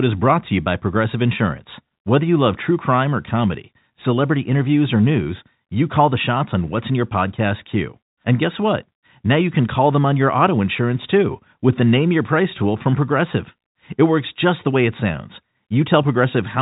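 The clip is speech carried over a G.711 telephone channel with nothing above 3.8 kHz, and nothing is technically wrong with it.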